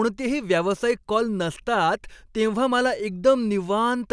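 Nothing in the recording stood out as a technical problem on listening.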